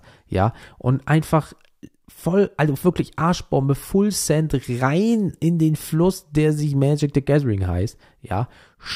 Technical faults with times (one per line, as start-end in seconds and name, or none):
none